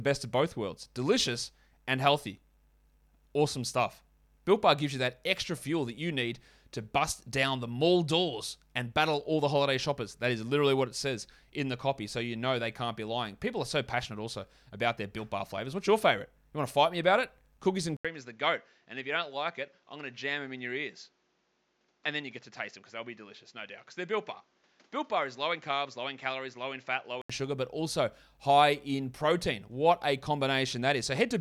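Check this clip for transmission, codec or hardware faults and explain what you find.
One fault is audible. Input switched to a poorer device, 17.97 to 27.30 s: likely a lesser microphone, removing everything above 7.6 kHz. After an 80 ms gap, the speech turns duller, slightly quieter and faintly noisier.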